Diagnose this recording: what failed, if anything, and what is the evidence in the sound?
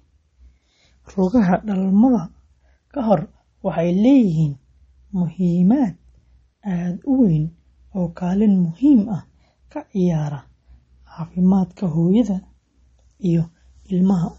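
The fault sits at the codec stage. Throughout the speech, nothing is present above about 8.1 kHz. The top end stops at a hard shelf rather than rolling off. Sibilants sound dull and swirly. Consonant attacks are smeared, and the background has a watery shimmer. The likely cause is MP3 compression at a low bitrate, in keeping with roughly 32 kbps. Short of bits, the encoder drops the treble at a fixed cutoff. It also zeroes weak frequency lines, which flicker frame to frame.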